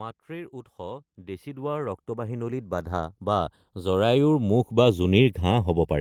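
A slow, sweeping flanging runs through the whole speech clip, heard when the two channels are summed to mono. This is channels drifting apart: each side was recorded on its own clock, and the delay between them creeps to under half a millisecond by the end, which fits the clocks disagreeing by something like 70 parts per million.

From 0.26 s to 5.25 s, the voice and the background noise swell together, climbing about 20 dB. This is automatic gain rising: the gain control judged the input too quiet and kept raising its gain gradually over those five seconds.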